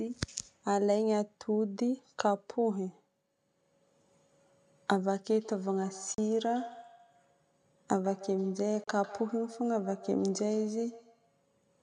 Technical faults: feedback echo between two devices; Bluetooth dropout

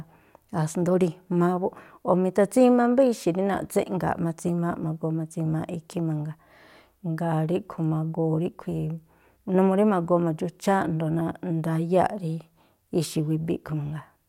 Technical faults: none

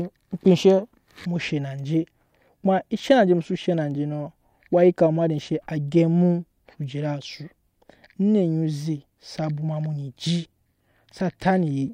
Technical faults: none

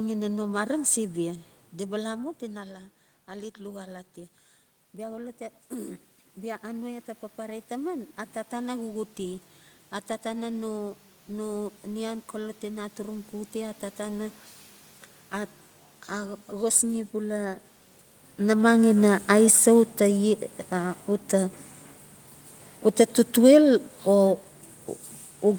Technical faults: automatic gain rising; automatic gain falling

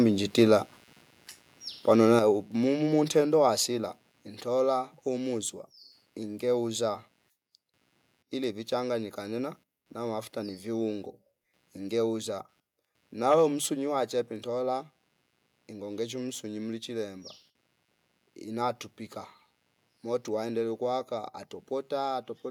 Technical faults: computer activity noise; microphone overload; microphone volume stepped down

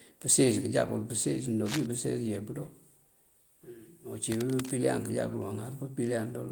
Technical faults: cable scratch noise

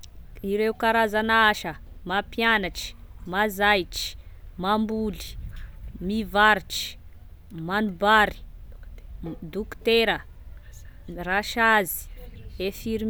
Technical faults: none

